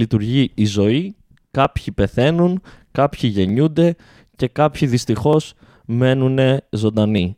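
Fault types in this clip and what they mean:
Clock drift buffer slips: from 1.65 s to 7.18 s, about four short clicks come at a steady 1.85 s spacing whenever speech is present. This is likely two devices running on separate clocks that disagree by roughly 400 parts per million, so the buffer between them gradually drifts until a small block of a few tens of samples is dropped or repeated, leaving a brief discontinuity each time.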